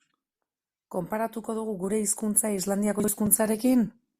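Chunks out of order at 3.0 to 3.08 s, just after "dugu gure hizkuntza": one 40 ms chunk plays a chunk late, swapping with its neighbour, so the speech jumbles briefly.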